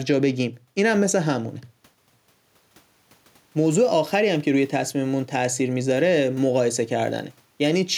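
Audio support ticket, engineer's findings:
No audible faults found in this speech recording.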